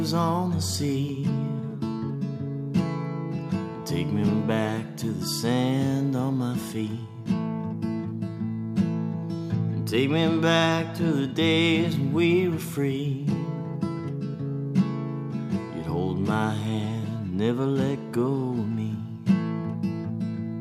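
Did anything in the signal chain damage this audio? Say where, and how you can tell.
No, nothing in the signal chain has left an audible mark on this audio, and every stage from capture to playback appears to have passed the signal on intact.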